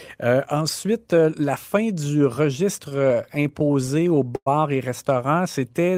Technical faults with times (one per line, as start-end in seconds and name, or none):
2.89-4.48 repeated stalls (stutter)
5.59-5.97 jitter buffer slow-down